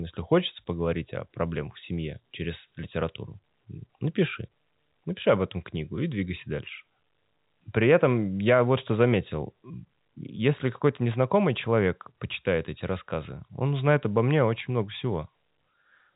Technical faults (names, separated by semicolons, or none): none